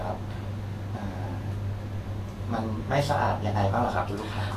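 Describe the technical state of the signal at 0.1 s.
At 0.1 s, as throughout, the speech has grainy, hissy treble that stops at 14.2 kHz. This is likely Vorbis compression near 34 kbps. Coarse quantisation turns high detail into noise instead of just dulling it, as a plain low-pass filter would.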